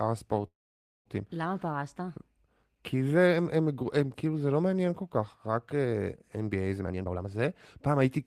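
At 0.47 s the speech stops and a call audio freeze holds for about 0.6 s, until 1.07 s. The likely cause is packets held up in transit, which lets the jitter buffer run dry. The receiver stretches the last sound into a brief buzz that fades within a few tens of milliseconds, then leaves silence for roughly 0.52 s. When the audio resumes it carries on from where it stopped, so nothing is missing, but everything after it is about 0.58 s later. On a spectrogram the final frame's harmonics smear into flat horizontal streaks that quickly fade, followed by an empty gap. The waveform shows a short decaying tail and then a flat line.

From 6.79 s to 7.44 s a jitter buffer speed-up compresses the speech. The buffer had built up more audio than it targets, so the receiver drained the excess by cutting out short stretches of one or a few pitch periods, again and again. That removes around half a second, and the speech plays at about 176% speed while its pitch stays the same, so it sounds rushed. 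On a spectrogram the harmonic spacing stays unchanged but syllables and formant movements are squeezed closer together. The waveform shows shortened voiced segments with splice points between periods.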